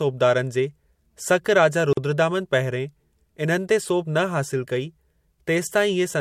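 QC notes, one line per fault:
1.93–1.97 s, gap at a join of encoded pieces: the audio was encoded in separate pieces, 4.0 s apart, and spliced without trimming the encoder's start-up delay and final-frame padding, so that added silence stays in the stream. Right after "जे सक राजा" the speech drops out for 43.2 ms, with edges that the codec smears, and then carries on from exactly where it stopped, heard as a brief hole in continuous speech.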